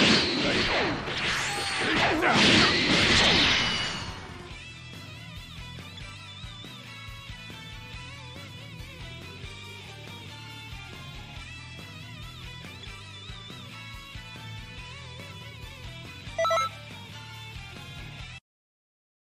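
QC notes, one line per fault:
14.77 s, damaged data in a compressed stream: a brief blip, under 20 ms. Corrupted bytes in the compressed stream made the decoder misread the frame there and lose sync, so it briefly produced garbage output before locking onto the next valid frame header.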